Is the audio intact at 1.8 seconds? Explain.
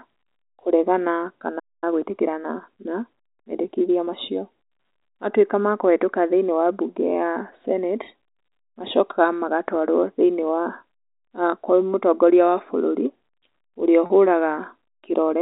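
No. A playback stall runs from 1.59 to 1.84 s, so the output is silent at 1.8 s for about 230 ms. The player likely ran out of buffered data or had its thread blocked, cutting the speech off mid-flow until it recovered.

Time-compressed catch-up follows from 1.84 to 4.12 s. To clear the backlog, the player removes small slices and cross-fades the joins, running about 1.1 times faster. The speech sounds hurried at its normal pitch.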